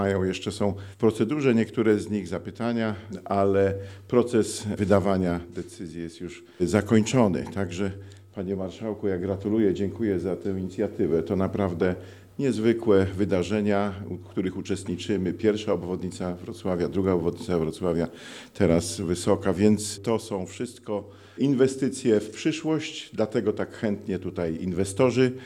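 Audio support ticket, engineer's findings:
Regular ticking at 25 Hz, whole clip, heard only while signal is present. Probable component: sample-rate converter, consistent with 44.1 kHz to 48 kHz. Resampler restarted on every block. 40 ms blocks processed in isolation, missing neighbouring samples, so an error lands at each block edge.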